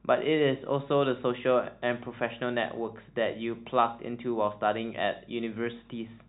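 A recording of speech with no technical fault to point to. Nothing at any moment in the recording calls for a fix.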